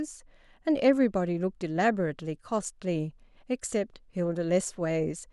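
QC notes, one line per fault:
No fault to note in this clip.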